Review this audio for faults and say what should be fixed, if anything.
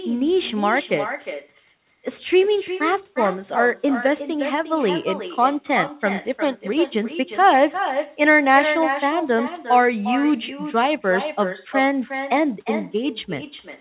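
An echo with no canceller runs throughout: the far end's loudspeaker feeds back into its microphone and nothing removes it, so the speech returns after roughly 0.4 s as a quieter copy, about 9 dB down and thin, shadowing every phrase. The hard cut-off at 4 kHz from the narrowband call path is expected for this link. Enable acoustic echo cancellation at the far end, or have that participant use a headset.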